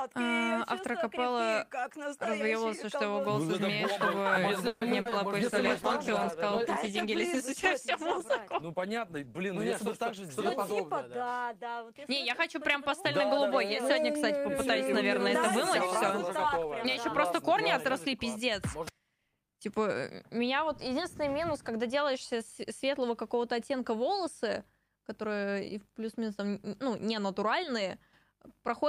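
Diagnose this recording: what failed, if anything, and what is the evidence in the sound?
At 4.67 s the audio stretches into a fading buzz for about 140 ms, then resumes at 4.83 s where it left off, with nothing lost. This is likely a call audio freeze in the network and jitter buffer stage: delayed packets drained the buffer, adding about 140 ms of delay.

Short concealed packet loss follows at 5.01 s and 5.09 s, 40 ms and 20 ms long, heard as brief smears or wobbles. These packets reached the decoder too late, so the receiver extended the preceding sound to cover each gap before blending back into the real audio.

A call bitrate drop runs from 5.41 s to 11.84 s. The encoder rate fell from 48 to 16 kbps and stayed at the minimum for about 3.9 s. The sound becomes rougher and duller as the codec quantises more coarsely and trims high frequencies.

Jitter buffer speed-up occurs from 9.55 to 10.57 s at 105% speed and from 15.86 to 17.50 s at 104%. 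The audio runs faster without any pitch change. The receiver cut small pitch-period slices to shed excess buffered audio, roughly 50 ms and 70 ms.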